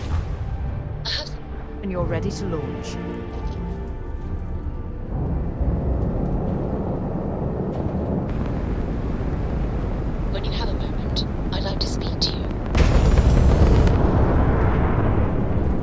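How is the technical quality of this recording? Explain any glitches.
No glitches turn up anywhere in the recording, and there's nothing to point to or explain. The audio holds together as one continuous stretch of sound with no breaks or disturbances.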